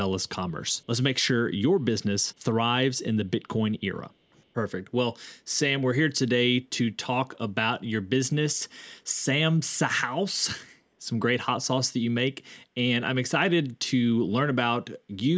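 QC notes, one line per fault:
0.71 to 0.86 s, echo leak. A delayed copy of the speech comes back about 318 ms behind it, around 40 dB below the speech. Likely cause: a loudspeaker on one side of the call, whose echo canceller let part of the played sound back through.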